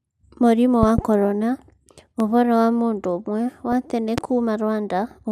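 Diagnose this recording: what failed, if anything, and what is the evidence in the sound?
The analogue side took sudden voltage steps, likely from a plug, switch contact or static discharge, which the following circuitry shaped into short pulses riding on top of the speech. The loud pops sit at 0.83 to 1.01 s, where two arrive in quick succession at about 15 dB above the signal, at 2.20 to 2.23 s at about 10 dB, and at 4.18 to 4.20 s at about 15 dB. The speech continues underneath each one.

Reception of the DAB broadcast failed between 3.58 and 3.73 s, where bit errors slipped past the error correction into the MP2 data across 11 frames. The damaged samples put short blips of noise in individual sub-bands, and wrong scale factors, where they get through, make sub-bands jump in level for up to a frame, which is the DAB burbling heard here: a brief patch of burbling over the speech. The residual bit error rate was about 0.05 percent.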